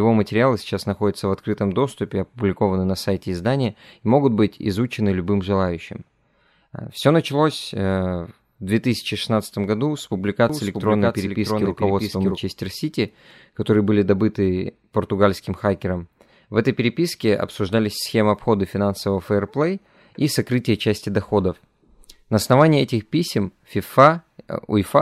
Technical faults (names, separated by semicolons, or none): doubled audio track